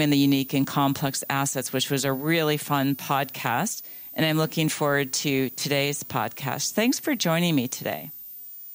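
A switching power supply in the chain is whistling throughout this speech clip, laying a high tone wandering between 14.5 and 15.5 kHz, roughly 15 dB below the voice, over the whole recording.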